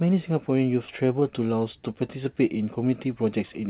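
At 1.2 s, lasting about 0.03 s, there is a short concealed packet loss: roughly 20 ms of audio, which fits a single lost packet, failed to arrive in time. The receiver extrapolated the preceding speech and crossfaded back, leaving a brief smear in the call's narrowband sound, which stops at 4 kHz, consistent with G.711 mu-law.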